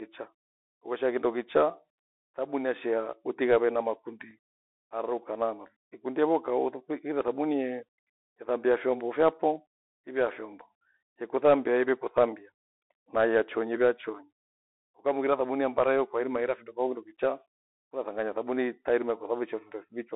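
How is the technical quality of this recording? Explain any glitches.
The recording has an obvious narrowband Bluetooth headset sound and one tiny glitch.

Throughout, it's the Bluetooth CVSD headset codec. The band sits at roughly 300 Hz to 3.7 kHz, consistent with the 64 kbps one-bit delta scheme. Its adaptive step can't keep up with sharp, loud high content, so s sounds get scratchy over a grainy hiss.

At 4.31 s there's a Bluetooth headset packet repeat. One 3.8 ms voice packet went missing and the previous one was decoded again in its place. Since it's a single packet and not a run, you hear just a small tick.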